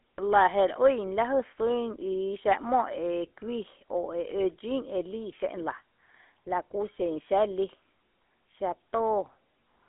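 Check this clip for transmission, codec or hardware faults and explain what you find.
One fault runs through the whole speech clip: GSM full-rate codec damage. The codec models the vocal tract and excites it with a sparse, regularly spaced pulse train, which fits the 13 kbps full-rate coder. Nothing survives above 3.8 kHz, the band sits at roughly 250 Hz to 3.5 kHz, and voices carry a plainly audible buzzy, gravelly roughness.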